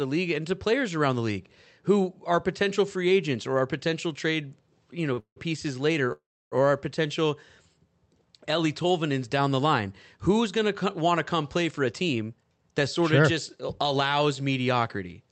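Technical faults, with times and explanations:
5.13 to 5.19 s, short stall from a late packet: a packet arrived late just after "potential trade you know", so the jitter buffer ran dry and the receiver stretched the last sound by 41 ms. Nothing is lost, but that sound lingers unnaturally with a faint buzz or dip.
5.19 to 5.38 s and 6.12 to 6.54 s, call audio freeze: packets were likely held up in transit, emptying the buffer again. The receiver extended the last sound, which then faded out. This inserts 168 ms of fill before "pieces later", about 90 ms of it silent, and 393 ms at 6.12 s, about 300 ms of it silent.
11.71 to 12.59 s, jitter buffer speed-up: the buffer held more audio than its target, so the receiver repeatedly cut out short pitch-period slices, about a tenth of a second in total. Between "want to come play" and "that sort of just", the audio runs at 113% speed with unchanged pitch and sounds hurried.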